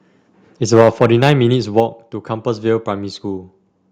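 Speech, with harsh, crackling distortion on the loudest syllables from 0.73 to 1.32 s and again briefly from 1.78 to 1.8 s. The peaks go about 8 dB and then about 1 dB past the converter's limit, and a few percent of samples are flattened. The likely cause is microphone overload, with the input set too hot for the converter. The level also drops abruptly at 0.81 s, by about 3 dB, and at 1.8 s, by about 4 dB. Both drops land right on the distorted peaks, pointing to the microphone volume being stepped down by software reacting to the clipping.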